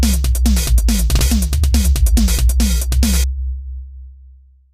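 At 1.19 s and again at 3.12 s, a repeated buffer occurs: new audio arrived late, so the last 1.33 ms block, which fits a 64-sample buffer, played again, three extra times and then twice. Each event is a brief buzzy click, losing a few milliseconds of sound.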